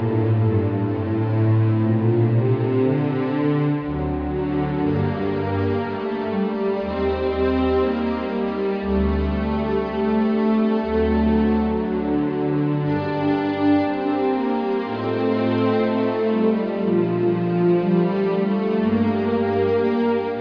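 No technical faults can be heard anywhere in the recording, and the signal stays intact and steady throughout.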